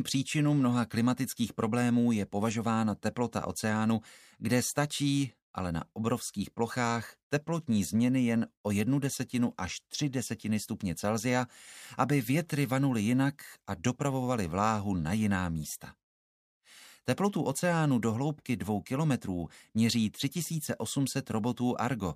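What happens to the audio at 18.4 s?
Nothing goes wrong at 18.4 s; the audio plays through that moment intact.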